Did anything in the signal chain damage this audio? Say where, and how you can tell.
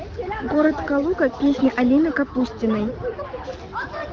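No, nothing in the signal chain damaged this speech. The AMR wideband (HD Voice) codec is audible as a working stage at 12.65 kbit/s, where it leaves only light coding character: the speech stays clear, with the band up to 6.4 kHz modelled directly and the top edge to 7 kHz filled with shaped noise.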